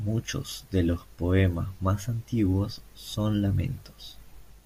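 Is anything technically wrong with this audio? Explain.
No, nothing technically wrong can be heard in this speech recording.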